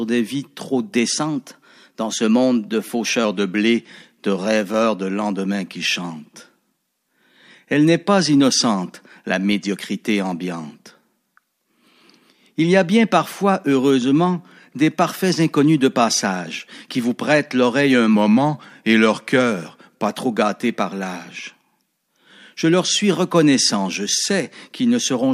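Drift correction steps occur from 1.13 to 3.24 s and from 18.15 to 20.09 s in this speech clip. In the first, speed jumps 5.58% faster and pitch rises about 94 cents. In the second, speed falls 5.58% and pitch drops about 99 cents. Each time the rate snaps back afterwards. The likely cause is clock-matching software abruptly changing its playback rate to drain, then refill, its buffer.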